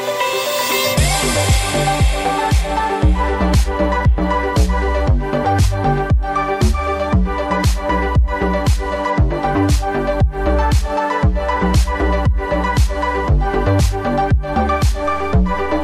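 A DC step at 15.05 s shifts the waveform's zero line by about -27 dBFS, as when a converter recalibrates or an offset input is switched in. It is heard as a low thump, and the offset then holds through to the end.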